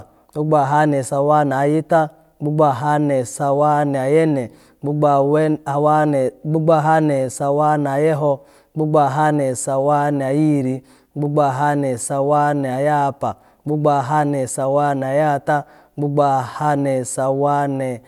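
No technical faults are audible.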